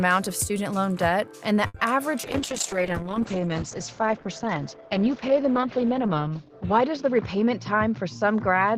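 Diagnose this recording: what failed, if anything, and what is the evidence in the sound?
Network and jitter buffer stage: a short stall from a late packet at 1.67 to 1.78 s. A packet arrived late, the jitter buffer ran dry, and the receiver stretched the last stretch of sound by about 70 ms to cover the gap before resuming where it left off. Nothing is lost. The audible sign is a sound held slightly too long, with a faint buzz or dip as the filler is synthesised.

Call processing and codec stage: a call bitrate drop starting at 2.25 s and lasting to the end of the clip. The bandwidth estimate fell and the encoder went from 64 kbps to 8 kbps, staying at its lowest for about 3.5 s. Coding becomes much coarser, giving a rough, watery texture, and the audio bandwidth narrows from 20 kHz to 8 kHz, so the top end sounds muffled and dull.

Jitter buffer stage: a jitter buffer speed-up from 7.02 to 7.75 s. 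The buffer held more audio than its target, and the receiver trimmed short pitch-period-length pieces repeatedly, taking out about 50 ms in total to reduce delay. Playback runs at 106% speed with pitch unchanged, so this stretch sounds slightly hurried and its timing is compressed.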